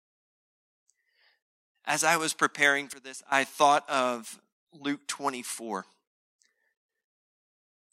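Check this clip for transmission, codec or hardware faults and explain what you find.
One fault stands out. From 2.93 to 3.32 s, after "I was preparing" and before "thought of", speech and background noise abruptly drop about 16 dB together: a sudden gain jump, likely a digital gain change applied without any ramp.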